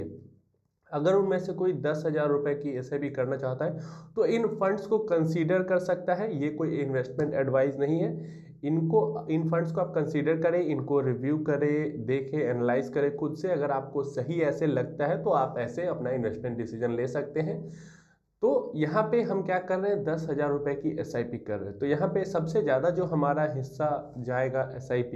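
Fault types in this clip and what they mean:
channel delay (comb filtering): One channel lags a fraction of a millisecond before mono summing. Notches start near 3 kHz and repeat evenly, so the sound is hollow throughout.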